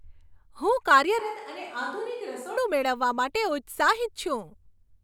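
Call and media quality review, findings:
Speech clip, just one thing to chase here.

1.19–2.57 s: sudden roomy, hollow sound, thinner bass, level down about 10 dB, noise floor up to about 30 dB below the speech; abrupt snap back. Likely a switch to a distant microphone: close mic feed lost, far pickup standing in.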